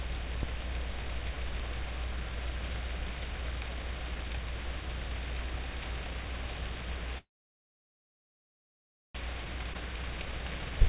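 At 7.18 s the audio stops and a gap runs to 9.17 s, almost 2 s long and silent for about 1.9 s after a brief fading tail. This is a call audio freeze: delayed packets likely left the jitter buffer empty, so the receiver stretched the last sound out and then went quiet. Nothing is lost; playback resumes where it stopped, now about 2 s late.

From 9.64 s to 10.4 s a jitter buffer speed-up follows. The receiver trims short pitch-period pieces repeatedly to work off the backlog, running the audio at about 116% speed with pitch unchanged. Roughly 150 ms is removed, and the passage sounds hurried.

Inside that stretch, between 9.74 s and 9.76 s, comes a skip ahead. About a second and a half of audio is dropped to recover the delay, and the two sides are butted together with only an 8 ms join, so the sound jumps forward abruptly. Throughout, the band stops at 4 kHz, which fits a G.711 A-law call path at 64 kbps.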